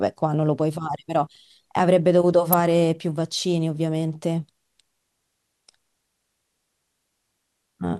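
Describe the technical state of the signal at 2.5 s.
At 2.53 s an electrical switching spike sits on top of the speech, a sharp snap peaking around -5 dBFS. A nearby switch, motor or static discharge likely arced briefly, and the audio line picked up that burst as a tight transient.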